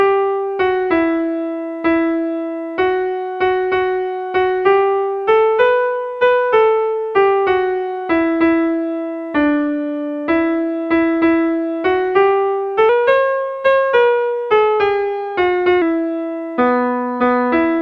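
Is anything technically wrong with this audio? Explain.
Yes, there's a wrong sample rate fault from about 12.89 to 15.82 s. For that stretch the samples are played back faster than they were captured, with no conversion, so everything runs 1.09 times faster and sits about 1.47 semitones higher. That ratio fits audio recorded at 22 kHz being played out at 24 kHz. You'll hear the sound turn slightly sped-up and sharp, then drop back to normal once the section ends.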